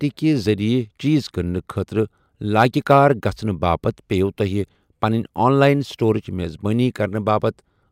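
No technical faults can be heard anywhere in this recording, and the signal holds steady throughout.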